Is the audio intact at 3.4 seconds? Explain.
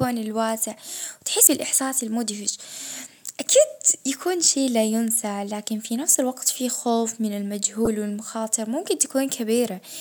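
Yes, the audio is intact at 3.4 seconds, with no dropout, click, distortion or other fault at that point.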